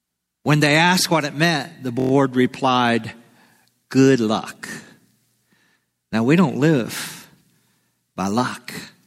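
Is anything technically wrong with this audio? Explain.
Yes, there's a system hang loop from about 2.00 to 2.11 s, right after "what it meant the". The machine or driver stalled while the audio hardware kept replaying the same ring buffer, so one 23.22 ms slice repeats exactly five times. That loop length fits a 1024-sample buffer. At a 43.1 Hz repeat rate it comes across as a brief, steady buzz. Essentially no audio seems to go missing around it.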